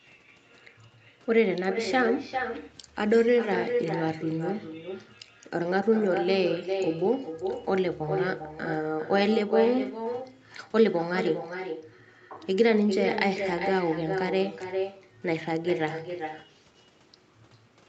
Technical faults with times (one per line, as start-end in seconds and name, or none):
0.00-17.89 echo with no canceller